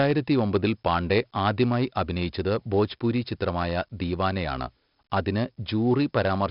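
Throughout, the speech shows heavy 4-bit ADPCM compression. Each sample is coded as a coarse step from a prediction, so gritty hiss rises and falls with loudness, unlike the fixed noise floor of simple bit reduction. Nothing sounds above 5.3 kHz, which fits about 44 kbps.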